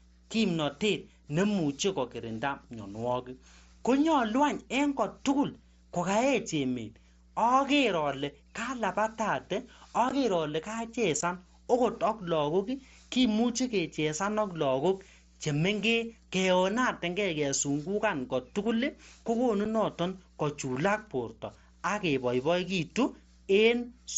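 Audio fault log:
Throughout: mains hum. A steady low 60 Hz tone sits under the speech at roughly 30 dB below it, with some low harmonics. It holds even level in the pauses. Power-line current is leaking into the signal path, most often through a ground loop between connected equipment or from a nearby transformer's magnetic field. The 60 Hz base frequency points to a 60 Hz mains supply.
10.09 s, 11.21 s, 19.65 s: unconcealed Bluetooth headset packet loss. The speech drops out abruptly three times, with sharp edges that can tick: 15 ms at 10.09 s and 11.21 s, and 7.5 ms at 19.65 s. These holes fit two lost headset frames, then two, then one. Audio packets between headset and phone failed to arrive, and the receiver inserted silence or an idle pattern instead of smoothing over the gap. The mSBC wideband link carries the speech around these holes.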